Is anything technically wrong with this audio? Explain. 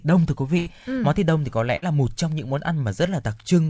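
Yes, there is a burst of packet loss twice: at 0.58 to 0.68 s, after "đông thưa quý" and before "ừ món thịt đông", and at 1.76 to 1.84 s, after "thịt đông thì có" and before "là một trong những". Each time roughly 80 ms, then 60 ms, of speech never arrived. The receiver stretched the last sound into a fading buzz or hiss, then resumed further on. A plain dropout would fall to silence. Here the gap is filled and the speech jumps ahead. The call path's wideband codec cuts everything above 8 kHz.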